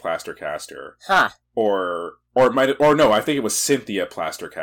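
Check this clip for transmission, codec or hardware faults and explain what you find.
There's hard clipping in this speech, four bursts: 1.12–1.25 s, 1.61–1.67 s, 2.38–3.30 s (ending just before "it was"), and 3.71–3.75 s (right after "it was"). Peaks overran a stage by about 1 to 8 dB, got sliced flat, and came out as crackly, fuzzy distortion, worst on the longer run.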